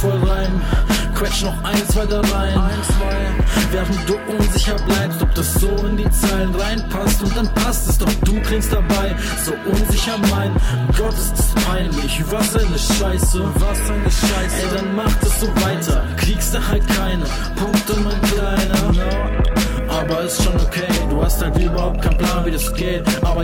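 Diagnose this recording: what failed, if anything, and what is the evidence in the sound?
Nothing stood out on listening that would point to a failure at any stage of the chain.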